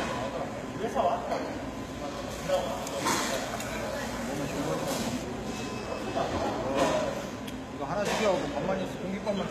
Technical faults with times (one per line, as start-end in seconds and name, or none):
0.00-9.50 HE-AAC compression
2.30-5.23 pre-emphasis left on